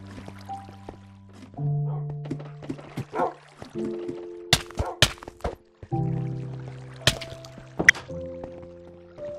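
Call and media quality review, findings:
Burbling noise blips over the programme at 0.58 s (very brief), 5.41 to 5.57 s and 7.71 to 7.90 s. DAB burbling: weak reception lets bit errors, a few tenths of a percent, past error correction, corrupting MP2 samples and scale factors so single sub-bands jump for up to a frame.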